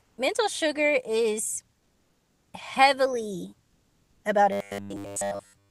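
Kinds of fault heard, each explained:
Comfort noise in place of the background: at 0.01 to 0.17 s, 1.79 to 2.53 s and 3.67 to 4.23 s the pauses carry a smooth, featureless hiss instead of the real background. It is about 8 dB quieter in the first gap and near the original level later, likely from Opus discontinuous transmission.
Robotic sound from repeated short buffers: from 4.52 s to the end, the speech turns into a rigid metallic buzz at a fixed 100 Hz, which fits a 10 ms stretch being replayed. Most of the passage is filled this way, likely because the jitter buffer starved while real audio was skipped.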